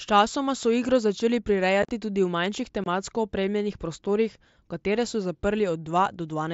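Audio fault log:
1.83–1.89 s and 2.84–2.86 s, unconcealed Bluetooth headset packet loss: abrupt silent gaps of 45 ms and 22.5 ms after "so igro začeli" and before "opremljenih prostorih", where lost mSBC frames were never filled in.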